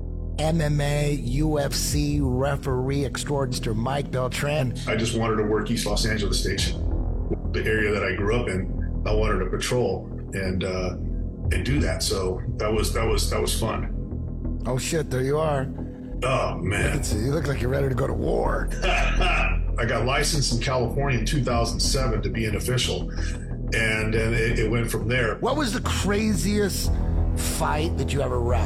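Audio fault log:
3.49–3.55 s, 4.55–4.60 s, 7.29–7.35 s, 18.67–18.73 s: compressed frames skipped. Whole blocks of coded audio never reached the output, either missing from the stream or rejected by the decoder as corrupt, so playback leaps forward. The gaps run from roughly a sixth of a second at 4.55 s to about half a second at 3.49 s and 7.29 s and nearly three-quarters of a second at 18.67 s. Each is a whole number of frames of about 46 ms.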